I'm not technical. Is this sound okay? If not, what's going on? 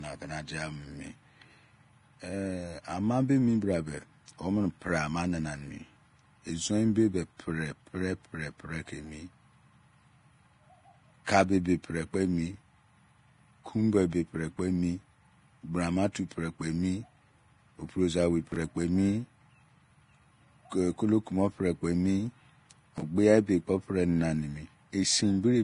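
No. Throughout, the speech sounds hissy and grainy, with dull treble and nothing above 10.6 kHz, most likely from heavy Vorbis compression. Unlike background noise, the grit follows the sound itself.

At 18.52 to 18.56 s and 22.98 to 23.02 s, there are chunks out of order: a 20-millisecond piece plays one slot late, briefly jumbling the speech. Unlike a dropout, nothing is missing.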